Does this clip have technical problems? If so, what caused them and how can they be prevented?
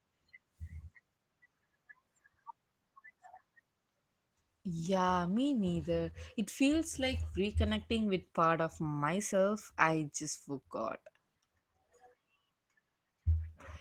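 Yes. Opus voice compression is audible for the whole speech clip. The sound points to Opus in hybrid mode: a linear-prediction coder handles the band below 8 kHz and a transform layer thinly codes the region above it. With so few bits, the excitation is coarsely quantised, which makes the voice hoarse and slightly robotic. That plainly audible damage fits a bitrate of about 16 kbps in 20 ms frames. To prevent it, encode at a higher bitrate, around 32 kbps or more for fullband speech.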